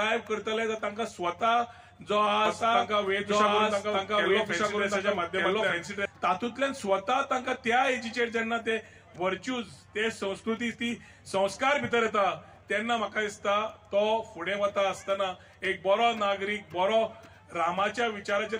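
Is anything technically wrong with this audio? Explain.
Yes. From 2.45 s to 6.05 s the sound is heard twice: a second, full-band copy trails the original by about a second, at roughly the same loudness, with no decay or room colour, and it cuts in and out abruptly at those points. This is a doubled audio track. The likely cause is the same signal being captured again through a slower path, or an edit leaving two copies out of step.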